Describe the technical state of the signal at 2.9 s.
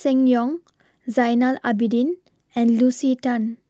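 At 2.89 s a brief 20 ms stretch of the speech turns rougher and noisier, with no gap: a lost packet rebuilt from error correction, using the next packet's low-bitrate copy.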